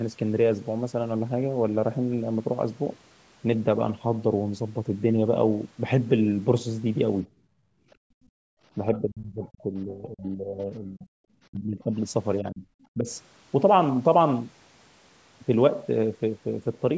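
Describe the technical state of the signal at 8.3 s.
The room background sinks by about 33 dB between 7.27 and 8.6 s: background gated by the echo canceller, which clamps the microphone while the loudspeaker plays.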